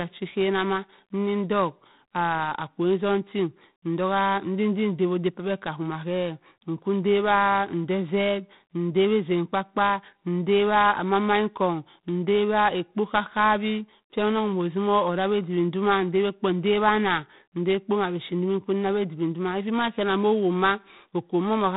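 From start to finish, the speech passes through G.726 ADPCM coding with too few bits per sample to track the prediction error, which fits the 24 kbit/s mode. The result is a harsh, rasping hiss that rises and falls with the speech level, and nothing above 4 kHz survives.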